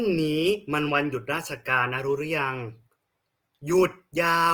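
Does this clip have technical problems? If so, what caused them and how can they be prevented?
Yes. Throughout the speech there is a rough, grainy texture, with voiced sounds turning noisy and hissy rather than swirling or warbling, which is likely Opus compression running in its music (CELT) mode at a low bitrate, consistent with about 24 kbps. The encoder fills starved bands with folded or noise-like energy instead of leaving gaps, so the grain replaces the watery, holey sound of MP3. The top end still reaches about 20.2 kHz, so there is none of the muffled narrowing of Opus's lower speech modes. To prevent it, encode speech at a higher Opus bitrate.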